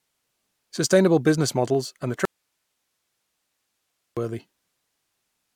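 At 2.25 s, right after "business models and the", the speech cuts off abruptly and only faint hiss, roughly 55 dB below the voice, remains until 4.17 s. This audio dropout to a faint residue lasts about 1.9 s, likely a lost signal feed while the downstream path stayed live.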